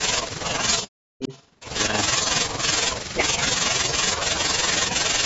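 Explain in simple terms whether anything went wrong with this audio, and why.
Several parts of the talker's speech drop sharply or cut out: from the start to 0.14 s, 0.51 to 1.3 s, 2.22 to 2.45 s, and 3.28 s to the end. This is likely speech suppressed in double talk, where the call turned the talker down while both sides spoke.

From 1.22 to 1.47 s, a faint copy of a voice returns about a third of a second late. This is likely an echo leak.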